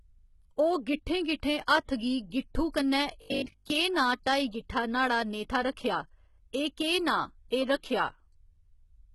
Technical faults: HE-AAC compression; robotic sound from repeated short buffers; pre-echo

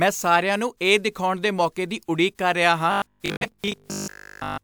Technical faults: robotic sound from repeated short buffers; corrupt frame muted

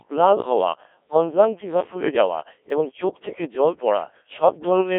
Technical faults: Codec 2 vocoder; block of digital silence

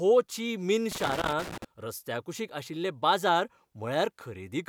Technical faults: loose connector crackle

